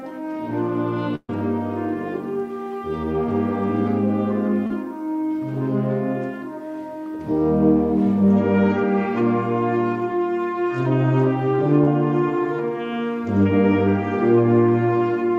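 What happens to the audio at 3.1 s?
Nothing goes wrong at 3.1 s; the audio passes through that moment intact, with no dropout, click, distortion or other fault.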